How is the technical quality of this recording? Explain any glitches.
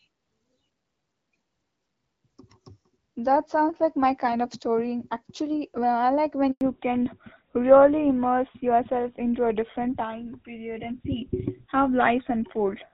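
The recording has two linked faults in the middle of the call, and the sound quality differs before and after them. Up to that point the speech carries the wider bandwidth and slight coding texture of HD Voice, consistent with AMR-WB at around 12.65 kbit/s.

The handover gap runs from 6.51 to 6.61 s, right after "like when". The call switched networks and no speech frames arrived during the changeover. The voice fades out almost at once and stays silent for 100 ms, and whatever was said in that stretch is lost.

The fallback to narrowband starts at 6.61 s, as the new link begins, and lasts to the end. The call left the wideband codec for an older narrowband one, which likely fits GSM full rate. Nothing above 4 kHz survives, so from here the voice sounds noticeably duller, muffled and rougher.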